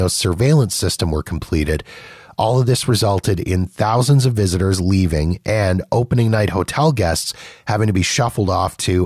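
The speech recording shows no technical fault at any point in the signal.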